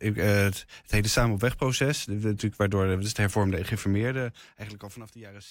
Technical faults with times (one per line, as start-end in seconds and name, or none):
3.95-5.16 zipper noise